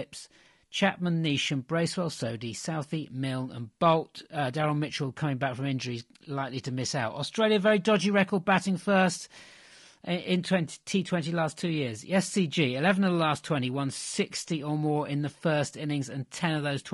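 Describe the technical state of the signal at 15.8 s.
At 15.8 s the speech is still going through what is likely low-delay AAC compression (AAC-ELD), whose roughly 10 ms frames resolve pitch harmonics poorly and, at a rate that fits about 32 kbps, leave the voice plainly rough and grainy, with noise between harmonics and a thin, synthetic top band.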